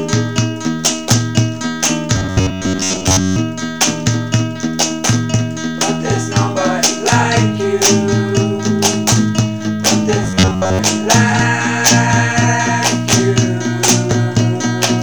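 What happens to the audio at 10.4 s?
From 10.24 to 10.79 s the sound becomes a rigid, metallic buzz near 94 Hz, robotic sound from repeated short buffers, likely caused by audio arriving too seldom so a roughly 11 ms chunk is looped over most of the span. A waveform shows identical repeating cycles; a spectrogram shows evenly spaced harmonic lines 94 Hz apart.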